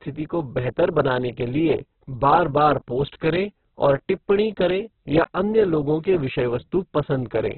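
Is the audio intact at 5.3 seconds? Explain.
No. At 5.3 seconds, as across the whole clip, the speech carries heavy codec damage. This is likely Opus compression at a very low bitrate, which fits about 8 kbps. Starved of bits, the encoder fills bands with folded or noise content. Nothing survives above 4.4 kHz, so the speech sounds narrowband, rough and grainy.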